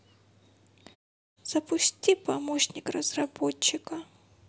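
This speech clip has nothing technically wrong with it.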